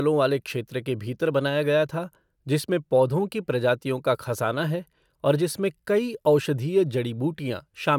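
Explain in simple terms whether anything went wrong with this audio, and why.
Nothing went wrong with this audio, because no fault can be heard anywhere in it.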